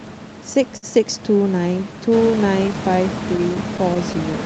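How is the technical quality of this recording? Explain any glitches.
The recording has timing glitches from the network path. They come from clock drift, a short stall and a cluster of tiny gaps near the end.

Clock drift between sender and receiver runs through the whole clip. The sender's clock is slower, by roughly 5 percent. Audio arrives a little too slowly for the receiver's playback rate. The jitter buffer keeps draining. The receiver must keep adding material to stay fed. You hear this as a faint unsteadiness in pace rather than one clear event.

Repeated timing corrections occur from 0.71 to 2.69 s. The receiver plays this stretch at about 98 percent speed. It adds roughly 40 ms in total, in small uneven steps. All the edits stretch the audio, none shorten it. Each step is tiny. Together they make the speech drag slightly, with a mildly wobbly tempo. A careful listener may catch small hiccups within it.

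A short stall from a late packet sits at 0.77 to 0.85 s. A packet missed its playout time, so the buffer ran empty. The receiver held the last sound for 58 ms until the packet came. Playback then resumed from the same point. Nothing is lost. That sound lingers too long, with a slight buzzy smear. Overall delay grows by the same 58 ms.

Scattered short gaps appear from 3.37 to 4.35 s. About seven packets there arrived late, spread across the span. Each hole is patched by continuing the previous sound. The longest patch is about 10 ms, and the patches total around 50 ms. No audio goes missing. You may hear brief ticks or tiny smears in the last second. The room noise rises by about 10 dB near 2 s.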